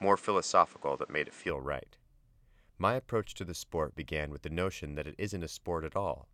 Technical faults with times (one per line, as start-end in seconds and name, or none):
0.00-1.50 input switched to a poorer device